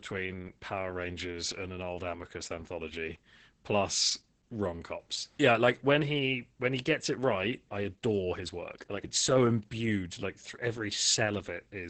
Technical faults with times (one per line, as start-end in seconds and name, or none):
0.00-11.90 Opus voice compression